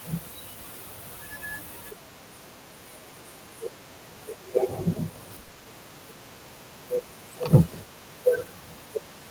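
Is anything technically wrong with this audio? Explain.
Yes. From 5.43 to 5.67 s the speech shows repeated packet loss (robotic sound): a rapid run of short holes, the longest 60 ms, each patched by extending the preceding sound, covering 140 ms, over half the span. Unlike a single dropout, the repeats give a choppy stutter.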